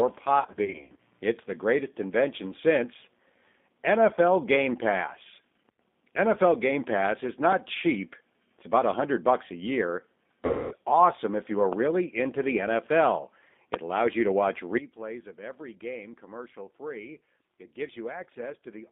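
Throughout, the speech sounds rough and slightly synthetic, with nothing below about 200 Hz or above 3.6 kHz. This is the G.729 codec (G.729A at 8 kbit/s), which rebuilds speech in 10 ms frames from a vocal tract filter, a pitch predictor and a few pulses, so the damage is plainly audible.

From 0.40 to 0.97 s the speech breaks into buzzy, smeared fragments that fade and recover repeatedly. This is VoIP packet loss concealed by the speech codec: about 270 ms of audio was lost, spread over 580 ms in runs of up to 50 ms. The decoder filled each gap by extending its last pitch and filter at falling gain.

At 5.69 s the whole signal, background included, drops by about 13 dB and comes back at 5.79 s. This sudden gain jump likely comes from a digital gain step applied without a ramp.

From 10.46 to 10.75 s a second concealment, covering 250 ms of lost audio, turns the speech into a buzzy tone or coloured noise that fades.

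At 11.73 s a sharp pop rises well above the speech, and at 13.74 s a much louder one stands far above it. Both are loud pops, each likely a voltage spike added to the signal, with the speech continuing underneath.

At 14.78 s the level falls by about 15 dB and stays down to the end, another sudden gain jump.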